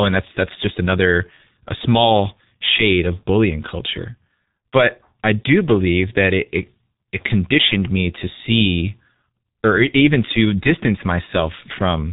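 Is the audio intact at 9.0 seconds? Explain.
No, at 9.0 seconds the speech is still running through the G.723.1 codec that colours the whole clip. Nothing above about 3.8 kHz survives, and the coarse 30 ms frame model leaves it muffled and hoarse with smeared consonants, which fits a very low bitrate around 6 kbit/s.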